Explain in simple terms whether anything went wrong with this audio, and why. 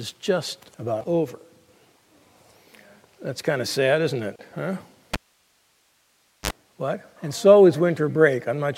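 A cable pulled and plugged in, from 5.14 to 6.51 s: a pop, then about 1.3 seconds of near silence while the lead is out, a brief 50 Hz mains buzz as only its tip touches, and another pop when the sound returns.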